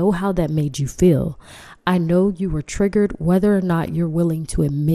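MP2 compression damage runs through the whole speech clip, from start to finish, plainly audible as a dull, gurgling, granular texture. The likely cause is MPEG Layer II coding at a low bitrate, which fits a rate near 80 kbps. Its upper sub-bands drop in and out, and the remaining ones are coarsely quantised.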